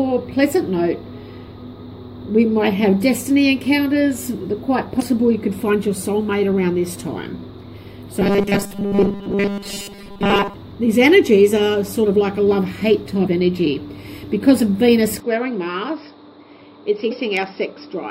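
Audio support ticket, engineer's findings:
Damaged data in the compressed stream: short glitches at 4.98–5.02 s, 13.23–13.28 s and 17.07–17.12 s, each about 40 ms. Decoder hits corrupted frames, loses sync, resyncs at the next frame header.

Robotic sound from repeated short buffers, 8.20–10.54 s: rigid metallic buzz at 200 Hz, tracking the underlying sound only loosely. Likely buffer underrun in the playback/capture path. The last 5 ms is looped to fill gaps, so most of the real audio in this span is replaced by repeats.

Input switched to a poorer device at 15.20 s, lasting to end of clip: no gap at the transition, narrower band, level drops a few dB, new background noise sits far below the signal. Likely capture moved to a lower-grade mic or headset call profile.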